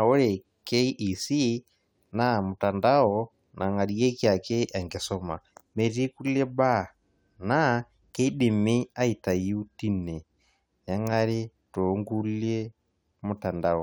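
There are no technical faults to describe at any point in this recording.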